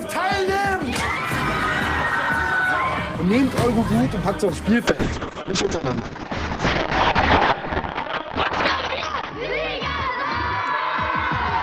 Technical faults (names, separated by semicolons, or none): call bitrate drop